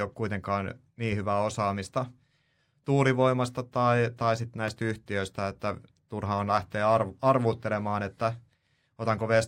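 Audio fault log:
4.68–4.70 s: loud pop. A single sharp pop rises about 5 dB above the speech, which continues underneath. It is likely a brief voltage spike from a switch, plug or static discharge.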